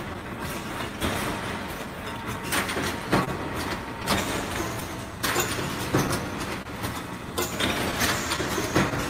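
Clock drift between sender and receiver runs through the whole clip. The sender's clock is roughly 2% slower than the receiver's, so the jitter buffer keeps draining. Small timing hiccups recur at uneven intervals.

Repeated timing corrections run from 0.23 to 5.20 s. To keep pace with the slow sender, the receiver repeats tiny slices of audio, playing this stretch at 99% speed and adding around 50 ms in total.

Scattered short gaps appear between 1.86 and 4.83 s. About five packets arrive late or not at all, and the receiver fills each hole by extending the previous sound. The longest fill is roughly 20 ms, about 50 ms altogether, heard as brief ticks or smears.

A short stall from a late packet occurs from 6.62 to 6.67 s. The buffer empties, and the receiver holds the last sound for 29 ms until the packet arrives, then resumes where it left off. Nothing is lost, but the sound lingers with a slight buzz or dip.

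Scattered short gaps return between 7.91 and 8.93 s. Roughly three packets are patched by continuing the preceding audio, the longest near 15 ms and about 40 ms in total. Each patch is a quick tick or small smear in the sound.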